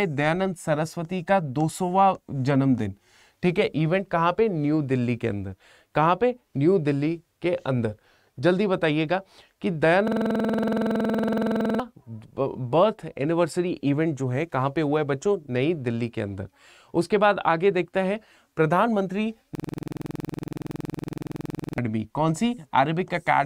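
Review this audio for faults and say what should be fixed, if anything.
A system hang loop occurs twice, from 10.08 to 11.80 s and from 19.55 to 21.78 s. Each time, the same 46.4 ms slice repeats exactly, giving a rattling stutter at about 21.5 Hz, which fits a 2048-sample ring buffer being replayed while the host stalled. About 1.5 s and 2 s of audio are lost. Unlike a dropout or underrun, the gap is filled with identical repeated material rather than silence or clicks. Prevent it by fixing the driver or host stall.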